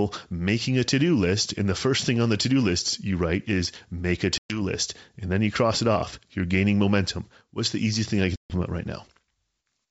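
Packet loss on an ADPCM call cuts hard holes at 4.38 to 4.61 s, after "write is make a", and 8.36 to 8.51 s, after "the easiest thing I". About 120 and 140 ms of audio are missing, which fits around seven lost packets each time. The gaps are filled with silence, and the decoder's predictor and step size drift out of step with the sender, so the speech resumes with brief distortion before settling.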